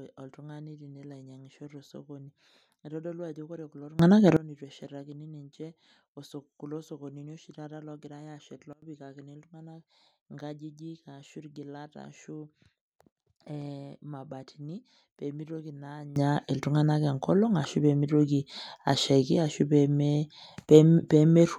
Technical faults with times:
3.99-4.37 sudden gain jump
8.73-8.82 sudden gain jump
16.16-21.59 sudden gain jump

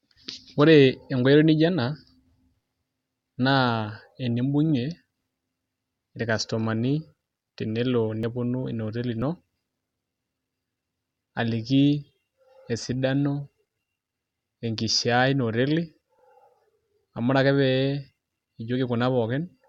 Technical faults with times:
8.23 overlap between stream segments
9.22 overlap between stream segments
10.21 overlap between stream segments
16.19 overlap between stream segments

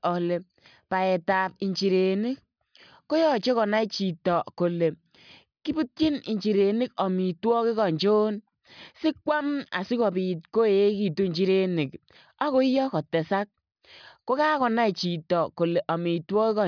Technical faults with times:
none

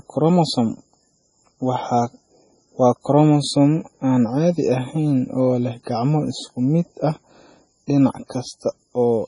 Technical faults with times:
0.00-9.27 MP3 compression

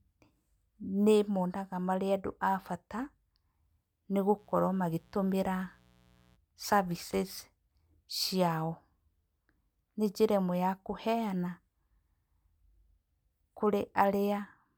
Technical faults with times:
4.35-6.38 mains buzz

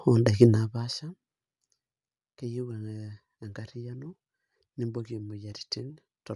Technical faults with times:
0.00-6.36 Bluetooth LC3 compression

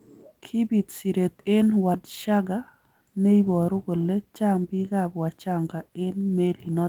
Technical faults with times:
0.00-6.89 sample clock jitter

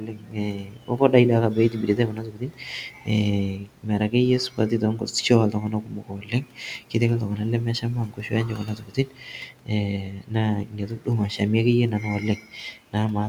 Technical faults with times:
0.00-1.13 speech cut by the noise suppressor
1.53-3.08 speech cut by the noise suppressor
3.56-4.13 speech cut by the noise suppressor
4.50-6.59 speech cut by the noise suppressor
7.81-9.70 speech cut by the noise suppressor
10.02-10.33 speech cut by the noise suppressor
10.64-11.07 speech cut by the noise suppressor
12.01-12.95 speech cut by the noise suppressor

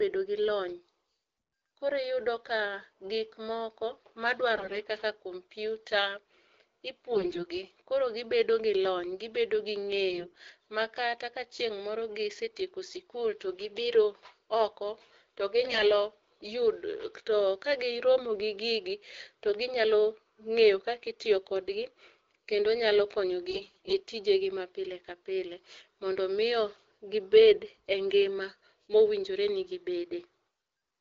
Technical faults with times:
4.56-4.74 AMR bit errors
7.12-7.45 AMR bit errors
10.10-10.38 AMR bit errors
15.64-15.85 AMR bit errors
23.50-23.94 AMR bit errors

